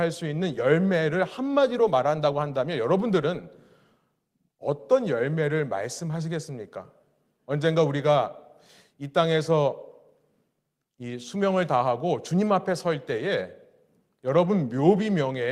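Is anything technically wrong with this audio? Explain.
No, nothing in this speech recording points to a technical fault.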